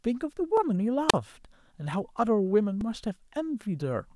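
At 0.57 s new audio failed to reach the output in time, so the device played its last buffer once more. This is a repeated buffer, and the tiny repeated slice fits a 64-sample buffer lasting under 3 ms. With so small a piece, the doubling is heard as a sharp click rather than a stutter, and nothing seems to be missing from the speech around it.

From 1.08 to 1.14 s the radio link of the wireless microphone weakened enough for the receiver's squelch to shut the output. That is a wireless microphone squelch dropout. Hiss rises briefly, then the sound drops into a hole of near silence lasting about 36 ms before the speech comes back.

At 2.81 s a second repeated buffer occurs. This time the same tiny slice, again consistent with a 64-sample buffer, plays twice more after the original. Two hard joins in quick succession make a short, harsh click or buzz, and again nothing appears to be lost.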